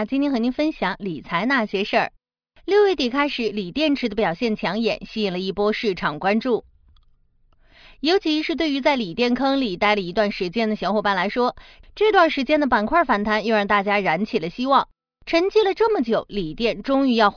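No technical faults are audible.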